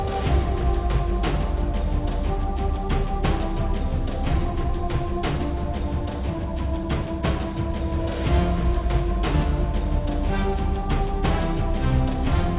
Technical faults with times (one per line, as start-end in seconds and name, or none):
none